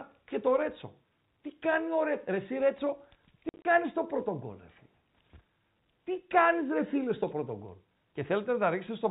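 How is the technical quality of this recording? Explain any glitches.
The speech comes over a telephone-band channel, with nothing above 4 kHz, and one short passage is broken up by dropouts.

Packet loss filled with silence occurs from 3.49 to 3.65 s, just before "στο πρώτο". About 100 ms vanishes in gaps scattered over 160 ms, the longest 50 ms, which fits 10 ms packets. Silence replaces them, leaving hard edges instead of the smeared repeats of concealment.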